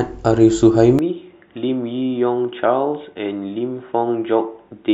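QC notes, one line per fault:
0.99 s to end, input switched to a poorer device: input likely moved to a narrowband microphone; speech abruptly loses everything above 3.8 kHz, drops about 5 dB, gains faint background noise.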